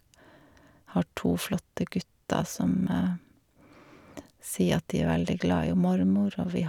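No technical faults are audible.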